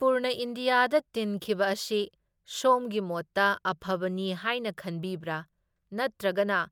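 No technical faults can be heard in this speech clip.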